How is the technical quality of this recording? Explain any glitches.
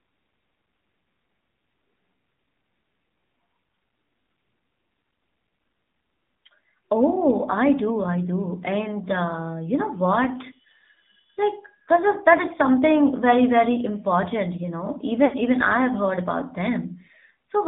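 Quality is poor, with telephone-grade speech throughout and one brief dropout near the end.

Throughout, AMR narrowband mobile coding squeezes the speech into roughly 200 Hz to 3.7 kHz and models it sparsely, plainly leaving it buzzy and synthetic; the texture points to a low rate near 7.4 kbps.

From 15.26 to 15.35 s, between "you know" and "even I have heard", lost AMR speech frames forced the decoder to reuse stale pitch and vocal-tract settings while fading the gain, so the speech smears and dips for about 60 ms, which fits three lost frames.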